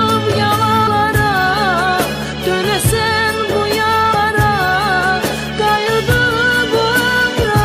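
Compressed frames skipped at 0.86, 4.14 and 7.43 s: whole frames never decode, so the sound jumps ahead by roughly a fifth of a second at the first two and nearly a third at the last. The frames are 23.2 ms long.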